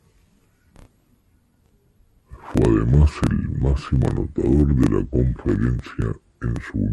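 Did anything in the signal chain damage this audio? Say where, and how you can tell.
Yes. A wrong sample rate at the playback stage affects the whole clip. The speech runs at about 0.73 times normal speed and sits about 5.5 semitones low, which fits 44.1 kHz material being clocked out at 32 kHz with no conversion. Speed and pitch drop by the same ratio. On a spectrogram, harmonics and formants sit lower than a natural voice, and the content ends near 16 kHz. The waveform's syllables look stretched in time.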